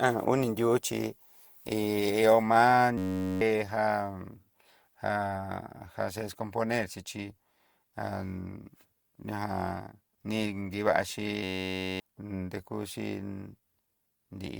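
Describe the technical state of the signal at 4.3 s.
At 4.3 s the signal shows generation loss, present across the whole clip rather than at that moment alone. It was likely decoded and re-encoded with Opus about five times, with a character that fits 64 kbit/s. Each pass requantises on a shifted frame grid, so noise and spectral holes compound. At 4.3 s the speech sounds swirly, smeared and hollow beyond what a single encode would give, with blurred attacks, though content still reaches up to about 20.2 kHz.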